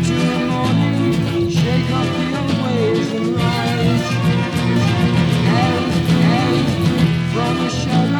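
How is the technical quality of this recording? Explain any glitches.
The recording has one glitch, a doubled audio track. From 4.76 to 7.04 s, a second, equally loud copy trails roughly 0.7 s behind, dry and abruptly starting and stopping, likely from a slower second capture path.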